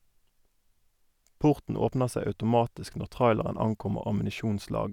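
No technical faults can be heard anywhere in the recording.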